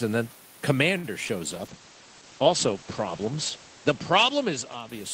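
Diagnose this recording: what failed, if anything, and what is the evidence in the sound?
At 0.97 s a short stall from a late packet holds the sound for about 63 ms, ending at 1.06 s. This is a network and jitter-buffer fault. The buffer ran dry while a packet was still in transit, so the receiver extended the last sound with a faint buzzy sustain. When the packet arrived, playback resumed where it had stopped. Nothing was lost, but everything afterwards plays about 63 ms later than before.

Between 1.24 s and 1.31 s there is short concealed packet loss: two consecutive gaps of roughly 20 ms each, which fits 20 ms packets dropped in transit. The decoder synthesised replacement audio by extrapolating from the preceding signal and then crossfaded back into real data. What you hear is a brief smear or wobble lasting about 40 ms.

From 1.52 s to the end, a call bitrate drop degrades the codec output. 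The bandwidth estimate fell, and the sender's Opus encoder went from 32 kbps to 12 kbps, staying at the lowest rate for about 2 s. Audible bandwidth narrows from about 20 kHz to 8 kHz, so the speech turns dull and loses its sibilant detail, with coarser, watery coding texture. The cause is congestion control, not the microphone or room.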